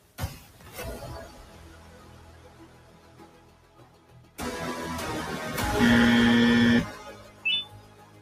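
The level pumps and flutters across the whole clip, with sustained parts sinking and recovering in a swing of around 20 dB. A noise suppressor designed for speech was left on and is treating steady tones, ambience and tails as noise to remove.

From 0.0 to 0.17 s, and again from 1.47 to 4.1 s, parts of the sound dip by up to about 4 dB. The suppressor mistook these stretches for noise and cut them harder, totalling around two seconds of affected sound.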